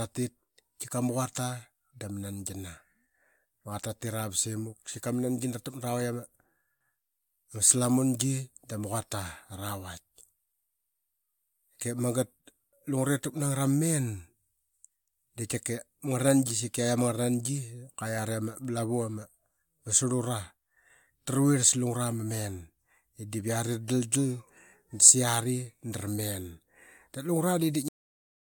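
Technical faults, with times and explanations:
27.88 s, cut-off end: the speech stops abruptly mid-sound and falls straight to digital silence for the final half second, with no natural decay. The closing buffers of audio were never written or played out, so the recording simply ends there.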